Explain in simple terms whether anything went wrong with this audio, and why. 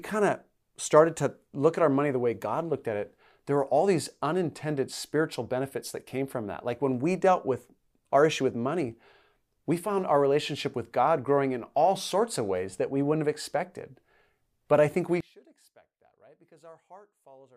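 Something went wrong from 15.2 s to the end: one of the two stereo channels was likely flipped upside down, a fault called one channel inverted. Each channel then pushes the speaker while the other pulls. When the two are combined into a single channel, the parts they share cancel out, and a voice in the middle is exactly such a shared part. So here the speech suddenly drops to a faint trace of itself.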